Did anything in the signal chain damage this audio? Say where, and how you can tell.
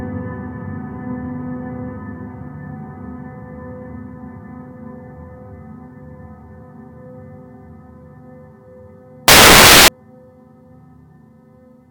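Yes. From 9.28 to 9.88 s the sample-format conversion stage produces samples built from the wrong bytes: each value is assembled misaligned or byte-swapped, so its rapidly varying low bits land in the high positions. For those 0.6 s the audio turns into loud, harsh broadband noise.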